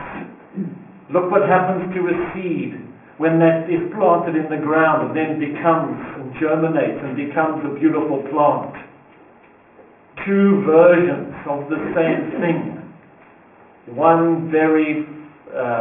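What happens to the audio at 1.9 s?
At 1.9 s you're hearing aliasing, and it isn't a one-off: it runs through the whole clip. The sound was downsampled without an anti-alias filter, and the band edge sitting at 3 kHz points to a new rate around 6 kHz. Anything that was above 3 kHz got mirrored back down below it, landing on unrelated frequencies around 20 dB under the main signal. That's why the top end sounds gritty and metallic, with the spectrum packed right up to 3 kHz.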